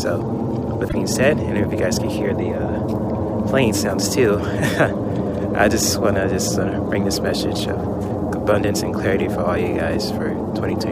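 A brief glitch cuts in at 0.85 s and is gone by 0.95 s. It is damaged data in a compressed stream: corrupted bytes made the decoder misread those frames and lose sync until it locked onto the next valid frame header.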